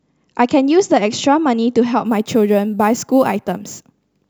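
A speech clip with crude rate conversion from 2.05 s to the end. Samples seem repeated rather than filtered, which fits a jump from 32 kHz to 44.1 kHz. That leaves an inharmonic, gritty fizz, roughly 25 dB below the speech, tracking louder and brighter sounds.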